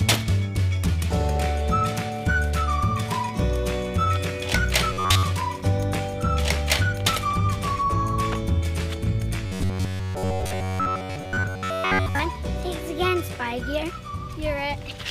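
From 4.93 to 5.24 s and again from 9.46 to 12.19 s, the audio becomes a rigid, metallic 93.8 Hz buzz. This is robotic sound from repeated short buffers, likely from data arriving too seldom: a segment of about 10.7 ms loops, replacing roughly 70 percent of the audio.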